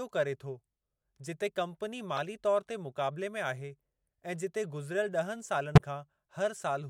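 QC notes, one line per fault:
2.16–2.19 s, corrupt frame decoded: just after "जिते कंपनी", a short chirp lasts about two frames. The decoder played frames with flipped bits, so misread gains and codes put energy at the wrong frequencies, peaking around -20 dBFS.
5.75–5.80 s, corrupt frame decoded: a louder blip, near -10 dBFS, spans about three frames. Damaged frame data again placed energy in the wrong bands until the stream recovered.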